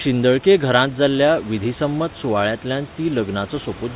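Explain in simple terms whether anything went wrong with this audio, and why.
Nothing went wrong here: the speech has the narrow, phone-like sound you'd expect from a call line that carries nothing above 4 kHz, and the faint room noise behind it sits well under the speech, which is simply part of where it was recorded.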